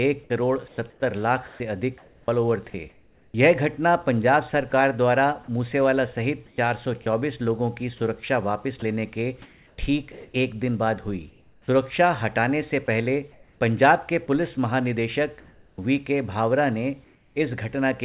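From 0.24 to 3.34 s, 4.7 to 7.06 s and 8.8 to 13.6 s, the sound is chopped by the voice detector, likely. Quiet parts drop out and steady hiss fills them: about 1.2 s, 0.2 s and 1.3 s in turn.

From 15.4 to 17.36 s, comfort noise likely replaces the background. For about 0.7 s the real background gives way to a flat, featureless noise. The sender stopped sending in the pause, and the receiver filled the gap with shaped noise.

From 15.76 to 15.78 s, the onset is clipped by the voice detector, likely. The detector reacted late when sound returned. The first 20 ms were never sent. The sound starts abruptly, without its soft beginning, over band-limited audio with nothing above 4 kHz.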